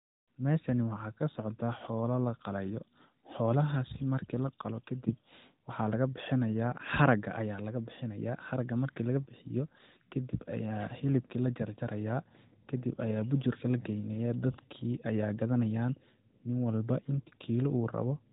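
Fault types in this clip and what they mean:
No fault can be heard in this speech clip. It comes through an AMR narrowband mobile codec, with the band stopping near 4 kHz and only light codec colouring, which fits the 12.2 kbps mode.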